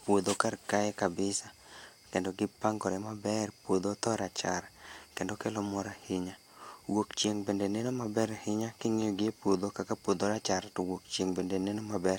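No technical faults can be heard anywhere here.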